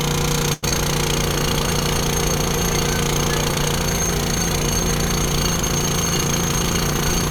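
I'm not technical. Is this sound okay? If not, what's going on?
No. Just after the half-second mark, from about 0.53 to 0.65 s, the sound stops moving forward and hangs on one moment for about a tenth of a second (92 ms), with a slight buzz or dip, before picking up exactly where it left off. This is a short stall from a late packet. A chunk of audio arrived late, the player had nothing queued, and it stretched the last sound until the chunk came in. Nothing is lost, but the timing slips by that tenth of a second.

Moments later, around 0.69 to 0.73 s, there is a tiny smear or wobble. This is short concealed packet loss. About 40 ms of audio never arrived in time. The player patched the hole by continuing the previous sound for around 20 ms and then blending back into the real audio, skipping the rest. That skip also wins back some of the delay the earlier stall added.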